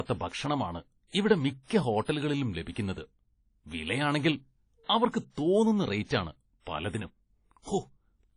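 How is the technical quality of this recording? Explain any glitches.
The technical quality is limited by one fault that runs through the whole recording. Nothing is heard above 10.1 kHz, so the speech sounds dull and closed-in, with the first encoding's artefacts still present. This is likely low-bitrate audio saved at a high bitrate: the file was first squeezed by a low-rate codec, pointing to something like WMA at 32 kbit/s, then re-saved as a roomy MP3. The second encoding cannot restore the discarded detail, so the original cut-off and artefacts remain.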